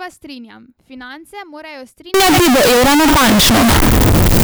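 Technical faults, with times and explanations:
2.14 to 4.44 s, float read as integer: from 2.14 s to the end the speech turns abruptly very loud and harsh, with the waveform flattened into a near-square shape at an almost fixed, high level. Background noise comes up to the same level as the speech, though pitch can still be followed. This likely comes from 32-bit float samples being read as 32-bit integers, so each sample's sign and exponent bits, not its true amplitude, set the level.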